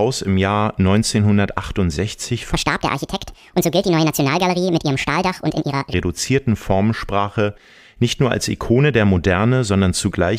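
A section at the wrong speed runs from 2.53 to 5.94 s, where the speech suddenly plays back about 1.67 times faster than it was recorded and then drops back to normal. Because speed and pitch move together, the voice jumps up by roughly ten semitones, sounding thin, chipmunk-like and rushed. The likely cause is this stretch being played or edited against the wrong clock.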